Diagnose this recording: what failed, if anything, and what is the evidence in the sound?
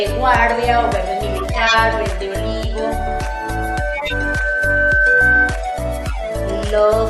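Corrupt frame decoded, at 1.37 to 1.74 s, 3.93 to 4.13 s and 6.03 to 6.32 s: codec-stage damage. Each burst is a short chirp or noise blip spanning several frames, the first being the loudest. Flipped bits gave the decoder wrong gains and codes, so it put energy at the wrong frequencies.

Loudspeaker feedback squeal, from 2.72 to 5.64 s: an acoustic loop at capture. A 1.5 kHz tone swells over roughly two seconds to about 5 dB above the programme. The microphone is picking up its own loudspeaker, and loop gain above one at 1.5 kHz lets that tone feed on itself.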